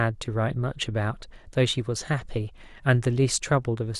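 No technical faults are audible.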